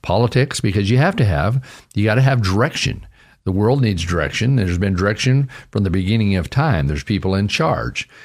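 An adaptive stream drops to a lower bitrate at 3.78 s and stays there to the end of the speech. The connection likely slowed, so the player switched to a cheaper rendition with no gap. The treble turns thin and synthetic, with a hissy, artificial sheen and more codec artefacts, which fits a move from 96 kbit/s AAC-LC to 48 kbit/s HE-AAC, where the upper band is rebuilt rather than coded directly.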